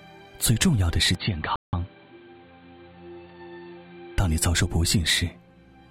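At 1.15 s the input likely switched to a poorer device, cutting everything above 4.5 kHz: the sound turns dull, drops about 5 dB and gains faint new background noise until 4.18 s. At 1.56 s a rebuffering stall left the player starved of data, so the sound falls silent for 0.17 s, then resumes exactly where it stopped.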